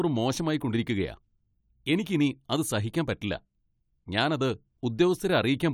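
Nothing technical stands out in this short speech recording; there's no fault here to point to.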